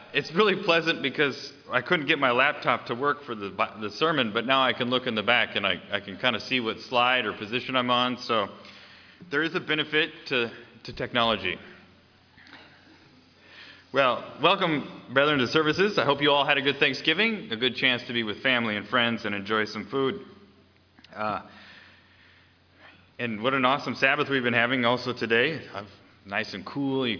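Nothing is technically wrong with this audio.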